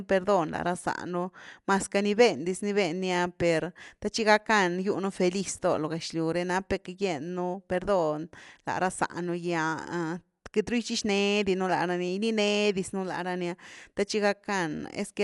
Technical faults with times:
0.00-15.24 Dolby Digital compression

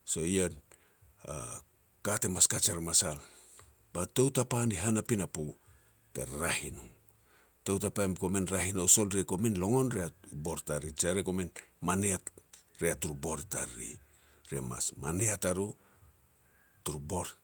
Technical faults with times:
none

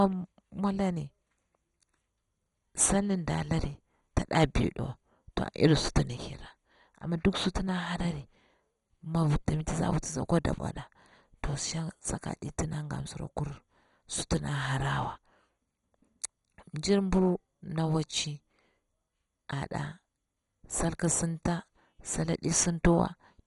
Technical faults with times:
0.00-23.47 MP2 compression

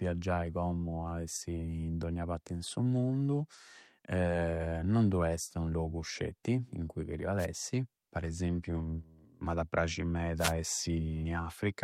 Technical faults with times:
6.43 pre-echo
7.38-7.46 wireless microphone noise hit
10.38-10.53 wireless microphone noise hit

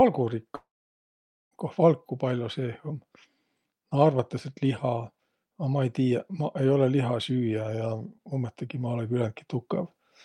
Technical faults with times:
0.55-1.53 long network dropout

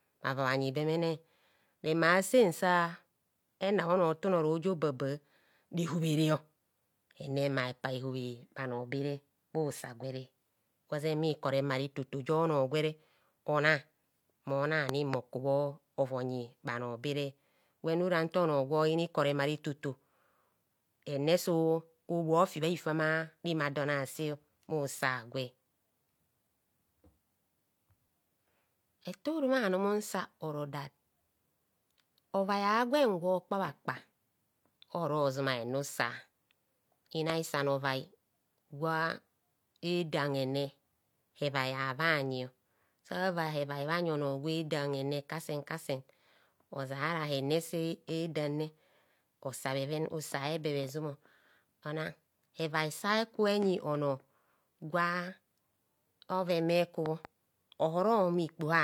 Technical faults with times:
14.89-15.16 loud pop
37.30-37.32 loud pop
57.06-57.27 loud pop

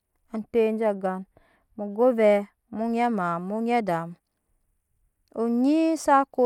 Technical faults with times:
0.39-2.79 channel delay (comb filtering)

